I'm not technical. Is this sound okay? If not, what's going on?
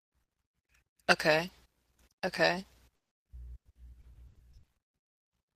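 No. From about 2.95 to 5.33 s the speech turns choppy and robotic: repeated packet loss. Seventeen pieces go missing, the longest 160 ms, and each hole is papered over by stretching the last sound. Unlike a single dropout, the gaps keep recurring across that stretch.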